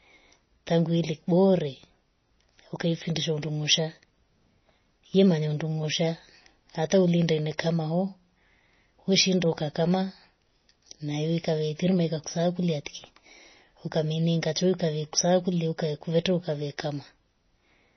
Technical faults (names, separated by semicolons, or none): MP3 compression